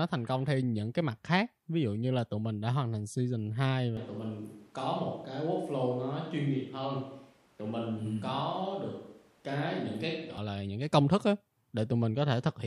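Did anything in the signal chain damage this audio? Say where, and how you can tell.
Yes. There is a switch to a distant microphone from 3.97 to 10.38 s, starting just before "là những cái công". The speech abruptly turns roomy, thin and about 5 dB quieter, likely because the close-mic feed dropped at capture.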